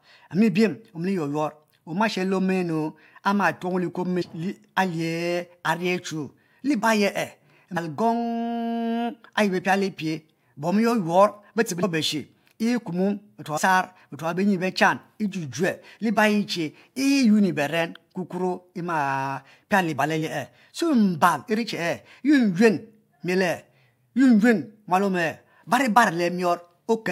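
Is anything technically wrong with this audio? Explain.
Yes. The speech has compressed frames skipped twice, at 7.76 s and 11.82 s. Whole blocks of the coded audio never reach the output, so playback jumps forward. The first jump loses about a fifth of a second and the second about 150 ms. Each fits a run of roughly seven frames of about 23 ms.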